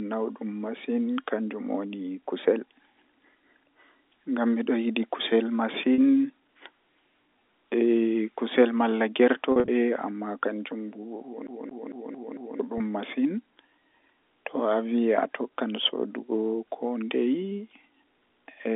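At 5.94 to 5.98 s a packet loss with pitch repetition appears: 40 ms of missing audio, consistent with two 20 ms packets, is bridged by repeating the last pitch period. It sounds like a brief, slightly held buzz. On a spectrogram the harmonics run flat and unchanging across the gap, and the waveform shows one identical cycle copied over and over.

From 9.52 to 9.68 s the same repair happens again, with 100 ms lost in pieces spread over 160 ms, the longest run 40 ms. This gives a rough, buzzy flutter. The spectrogram shows several short flat harmonic patches.

From 11.47 to 12.60 s the audio behaves like a CD stuck on one turn. A 225 ms stretch plays five times with a short mute at each jump back, producing an even, rapid stutter. The waveform shows identical blocks repeating, separated by tiny silent gaps, and the spectrogram repeats the same pattern at a fixed interval.

At 12.78 s a single 20 ms loss gets pitch repetition, heard as a tiny held buzz and seen as a short flat harmonic smear. 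Throughout, the telephone band of about 250 Hz to 3.6 kHz from G.711 coding is audible as a thin, band-limited sound.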